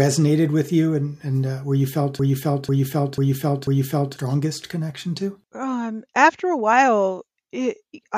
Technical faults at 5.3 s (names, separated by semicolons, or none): none